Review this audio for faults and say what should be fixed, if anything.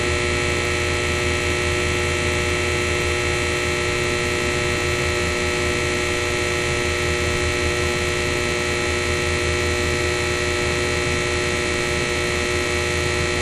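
Loose connector crackle occurs from 5.23 to 5.36 s. A worn contact briefly makes and breaks, chopping the signal into scratchy pops. Reseat or replace suspect cables and clean connectors before recording.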